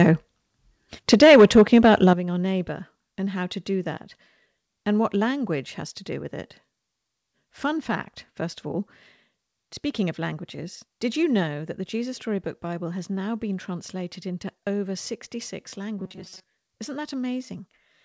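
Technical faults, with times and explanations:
0.00–0.09 s and 1.12–2.11 s, microphone overload: the loudest peaks are squared off, about 3 dB over the limit at the start and about 6 dB over in the second stretch. Roughly a few percent of samples are flattened. The cut tops add a harsh crackle. Too much input gain is the likely cause.
1.14 s and 2.13 s, microphone volume stepped down: the level drops suddenly, by about 4 dB and then about 10 dB. The second drop comes just before "our neighbour and how". Both follow distorted peaks. Software likely lowered the input gain to stop the clipping.
15.98–16.46 s, robotic sound from repeated short buffers: the sound turns into a stiff metallic buzz at 188 Hz. Most of this stretch is repeated audio rather than new signal. A repeating period near 5.3 ms likely comes from late audio being filled by looping the last short buffer.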